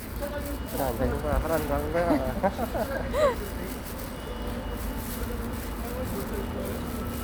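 Nothing in this recording of everyday sounds stands out as a technical fault, so there's nothing to flag here.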